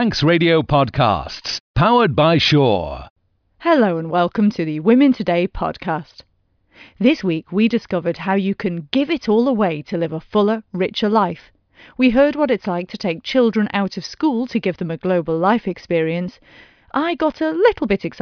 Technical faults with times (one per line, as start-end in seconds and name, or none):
none